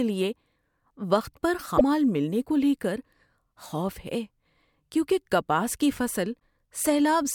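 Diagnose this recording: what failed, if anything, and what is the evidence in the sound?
Brief glitches at 1.74–1.81 s and 6.36–6.41 s in the speech mark damaged data in a compressed stream: corrupted frames make the decoder lose sync and resynchronise.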